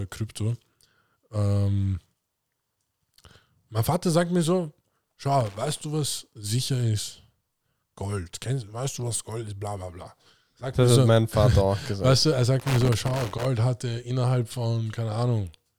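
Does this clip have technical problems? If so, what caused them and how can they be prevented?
Yes. Loose connector crackle hits the speech at 5.40–5.81 s and 12.60–13.45 s. A worn or dirty contact makes and breaks, chopping the signal into irregular scratchy bursts rather than the evenly spaced ticks of buffer dropouts. Cleaning, replacing and securing the connector prevents it.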